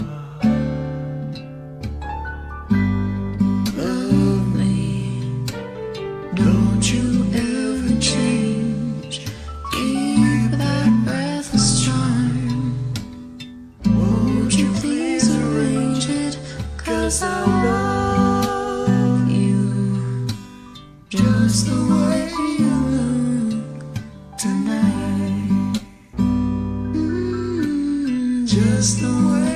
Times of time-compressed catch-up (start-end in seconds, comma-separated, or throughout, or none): none